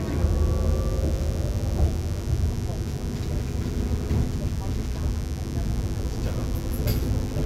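From start to finish a steady, raspy mains buzz sits under the sounds, roughly 20 dB below them. Sharp switching spikes from a dimmer, rectifier or unshielded cable entered the chain twice per 50 Hz cycle, producing a comb of 50 Hz harmonics. On a spectrogram these appear as evenly spaced horizontal lines climbing into the kilohertz range. In the waveform, small, regular spikes recur every 10 ms, riding on the signal throughout.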